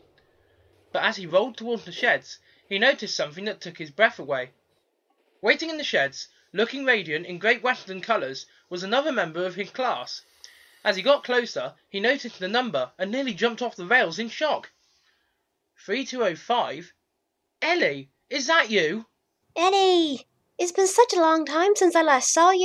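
No technical faults can be heard anywhere in the audio.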